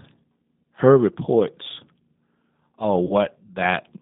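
Throughout, the speech passes through the G.729 codec, consistent with its 8 kbit/s form, which rebuilds each frame from a vocal tract filter, pitch predictor and a few pulses. The band runs only from 150 Hz to 3.7 kHz, and the voice sounds plainly rough and synthetic.

From 3.07 to 3.13 s, VoIP packet loss concealed by the speech codec occurs. About 30 ms of data went missing, which fits three lost 10 ms frames. The decoder extended its last pitch and filter at falling gain, so the voice smears into a fading buzz or coloured noise and stays weakened briefly after the packets return.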